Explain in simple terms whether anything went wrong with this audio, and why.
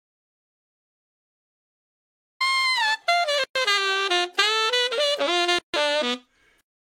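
The input feed was most likely lost at the very start, through a disconnected device, a failed link or a stray mute, while recording carried on writing pure silence. That is an audio dropout to silence: from 0 to 2.40 s there is nothing at all, not even background hiss, and the sound only begins after it.

Later, the file was assembled from separately encoded pieces joined without trimming the padding each encoding run adds. Each gap at a join of encoded pieces is a short hole in continuous sound, 116 ms at 3.44 s and 151 ms at 5.59 s, with smeared edges. The sound then resumes where it stopped.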